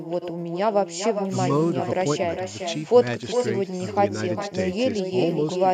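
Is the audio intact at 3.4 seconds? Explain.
No. At 3.4 seconds, as throughout the clip, the speech carries echo with no canceller. The far end is playing the call over a loudspeaker, its microphone picks that playback up, and nothing subtracts it before it is sent back. The result is a delayed copy of the speech arriving roughly 400 ms after the original, at about 8 dB below it, sounding thinner, so each phrase is shadowed by its own trailing repeat.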